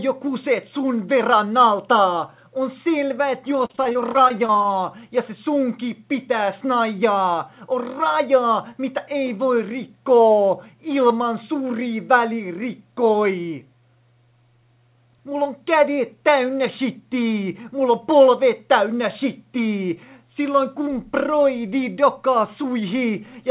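From 3.66 to 4.66 s, repeated packet loss (robotic sound) chops the audio: about a dozen short holes, none longer than 33 ms, each filled by stretching the preceding sound. Roughly a quarter of that second is synthetic fill, heard as choppy stutter within the 4 kHz band.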